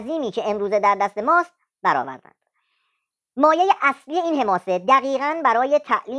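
Speech runs fast and high from start to finish, the mark of a wrong sample rate: samples played back quicker than they were captured, with no conversion. Tempo rises by 1.38 times and pitch by about 5.5 semitones, which fits audio recorded at 16 kHz and played at 22 kHz. What separates it from a pitch shift or a time-stretch is that speed and pitch move together by one fixed ratio for the whole clip.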